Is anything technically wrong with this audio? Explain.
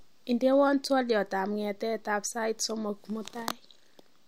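No technical faults are audible.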